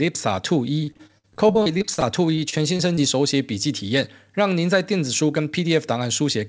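From 0.84 to 2.99 s the speech breaks up with repeated packet loss, giving a robotic sound. Packets keep going missing or arriving late. Each hole is covered by stretching the last bit of sound forward. Then the next hole arrives soon after. Around a fifth of this span is patched, roughly 440 ms in total. The longest single gap is 55 ms. The result is choppy, with pieces of the speech gone.

From 4.91 to 5.62 s there is a jitter buffer speed-up. The receiver had more audio queued than it wanted. To catch up, it cut out short pitch-period slices many times in a row, roughly 70 ms altogether. The speech plays at about 109% speed but keeps its pitch. It sounds briefly hurried. Through the whole call path, the sound is band-limited, with nothing above 8 kHz.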